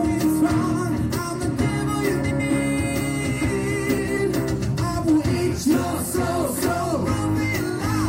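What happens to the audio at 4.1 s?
Frames out of order, from 3.98 to 4.18 s. Two neighbouring blocks of about 93 ms each were decoded in swapped order. That points to runs of four frames. The stretch plays with its halves exchanged, as a garbled flutter. No time is lost.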